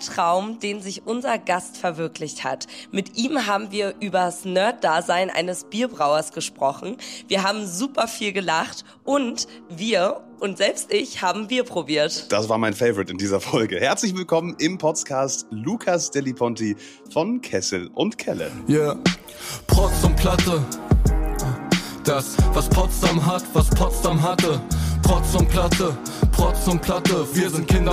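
Listening closely, nothing in the audio stood out as a technical problem at any point.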